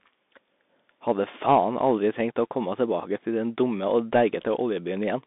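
From start to finish the speech runs through a Bluetooth CVSD headset codec, and the damage is plainly audible. Nothing gets through above about 3.8 kHz, the band sits roughly 200 Hz to 3.6 kHz, and the one-bit up-down coding leaves scratchy sibilants and a grainy hiss, which fits a 64 kbps stream.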